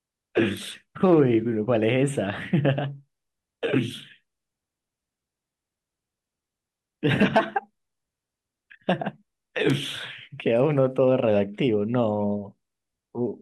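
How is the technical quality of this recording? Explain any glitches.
Two brief glitches stand out in the speech. An electrical switching spike at 0.57 s and again at 9.70 s is likely a nearby switch or motor arcing onto the audio line, heard as a sharp snap peaking around -20 dBFS, then louder near -10 dBFS.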